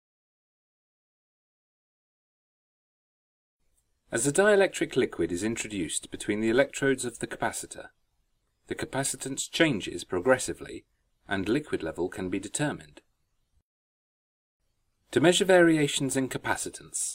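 Nothing in this recording stood out as a technical problem on listening.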